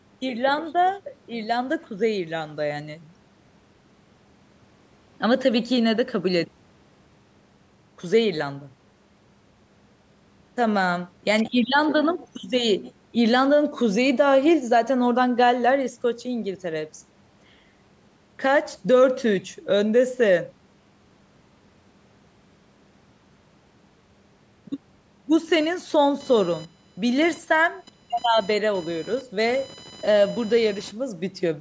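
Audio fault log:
25.60–30.91 s computer activity noise: a buzzing whine pulsing at around 1 kHz, roughly 25 dB below the speech, rides on the call microphone path. Processor or graphics load shifts the shared audio ground, so it follows machine activity, not the talker.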